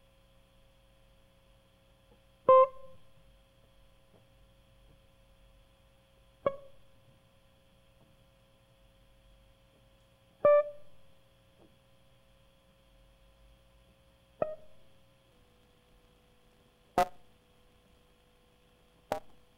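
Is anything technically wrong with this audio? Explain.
Yes. From 15.31 s to the end, a block size mismatch (truncated) drops each block's tail, fitting a 256-sample read, giving a 172 Hz buzz and music running 1.88 times faster at roughly normal pitch, unlike a sample-rate error.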